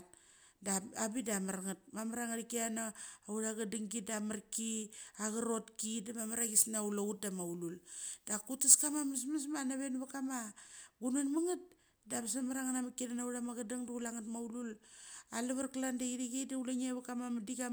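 A speech recording with pre-emphasis left on from 6.19 to 9.18 s. The treble boost was never undone. Highs sit about 8 dB above 1 kHz at 10 kHz, which fits the CD 50/15 µs curve. The sound turns thin, bright and sibilant.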